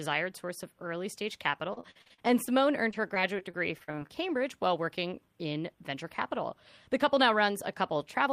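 Repeated packet loss (robotic sound) appears first from 1.73 to 2.49 s, just after "source of early stage", and again from 2.91 to 4.10 s. In each stretch audio kept dropping out in short holes, none longer than 45 ms, and the receiver bridged each hole by extending the last sound. In the first stretch about 235 ms is patched over and 140 ms lost outright, nearly a third of the span. The second patches 218 ms and loses 220 ms. The result is a choppy, robotic texture with fragments missing.

A jitter buffer slow-down follows from 4.23 to 4.69 s, ending just before "working in". The receiver's buffer needed more reserve, so it repeated single pitch periods or slices of pause several times in a row, adding 40 ms. That stretch plays at 92% speed without any change in pitch, so the sound is slightly drawn out and can carry a faint warble.

A jitter buffer speed-up runs from 6.55 to 8.28 s. Here the buffer held more audio than its target, so the receiver trimmed short pieces one or a few pitch periods long, over and over, removing around 70 ms in total. 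The audio moves at 104% speed and keeps its pitch, which gives the closing stretch a slightly faster pace.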